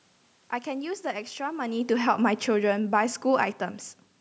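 From 1.58 to 3.59 s, speech and background sink together by about 4 dB: automatic gain falling, the control having judged the input too loud or its background noise too strong.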